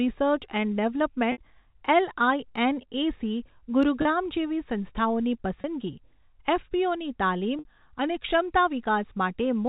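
Packet loss with pitch repetition breaks up this telephone-band speech at 1.32, 4.02, 5.61 and 7.59 s. Each gap is bridged by repeating the last pitch period, so the sound briefly holds as a slightly buzzy, frozen tone. The 30 ms gaps at 4.02 and 5.61 s fit a single lost packet, and the 60 ms gaps at 1.32 and 7.59 s fit two in a row. The G.711 coding keeps everything below 4 kHz.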